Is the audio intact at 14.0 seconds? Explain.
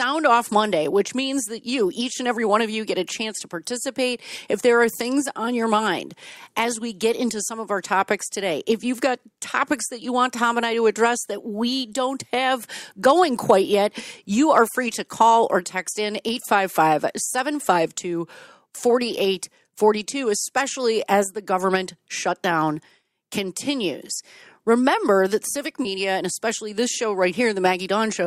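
Yes, the audio at 14.0 seconds is intact, with no dropout, click, distortion or other fault to be heard at that point.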